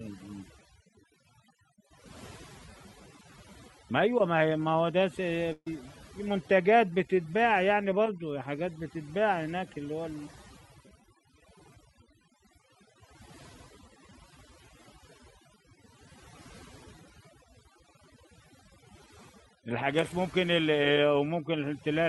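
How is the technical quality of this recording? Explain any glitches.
The recording has two clear faults: heavy processing across the whole clip and one short dropout.

Overdone noise removal runs throughout. The denoiser cuts any frequency band near its noise estimate, taking quiet speech detail with it, so the background sinks to near silence with twinkling specks. A spectrogram shows scattered isolated blips in otherwise empty regions.

A burst of packet loss occurs from 5.52 to 5.67 s. About 140 ms of speech never arrived, and the receiver stretched the last sound across roughly 138 ms, fading it down. This is heard as a held, decaying buzz or hiss, with a brief silence of about 30 ms before speech resumes further on. The waveform shows a repetitive fading stretch followed by a flat gap.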